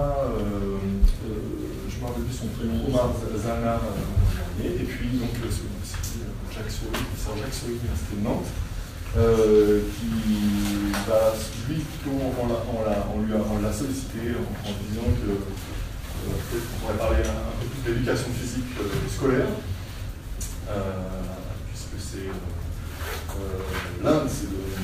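No technical faults can be heard anywhere in the clip. Nothing in the audio points to a dropout, glitch or other transmission or processing problem at any point.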